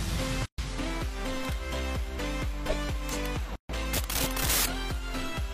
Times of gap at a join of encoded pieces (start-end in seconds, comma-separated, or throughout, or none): 0.46-0.58, 3.56-3.69